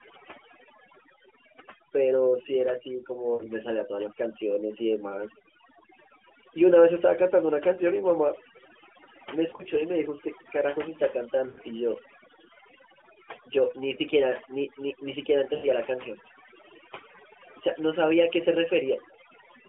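Overdone noise removal runs through the whole speech recording: an over-aggressive suppressor pulls bands near its noise estimate down hard, leaving near-silent, twinkly gaps. Lost AMR speech frames cause brief gaps at 3.34 to 3.50 s, 9.50 to 9.69 s, 11.48 to 11.60 s and 15.54 to 15.67 s. The decoder holds the last good settings with falling gain, so the voice smears and fades, then returns weakly. The audio sits in a narrowband 250 Hz to 3.4 kHz telephone band, which fits AMR-NB at 12.2 kbps.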